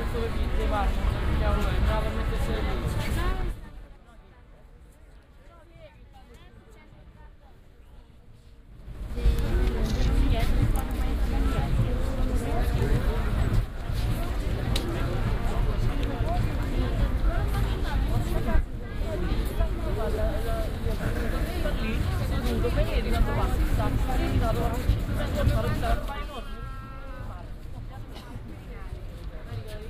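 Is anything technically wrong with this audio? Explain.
Yes. Zipper noise at 3.28–4.0 s, 8.68–9.28 s and 25.92–26.44 s: the level moves in unsmoothed 3 dB steps, each clicking, so the level changes tick audibly.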